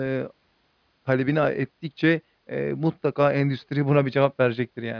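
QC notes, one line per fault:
No audible faults found in this speech recording.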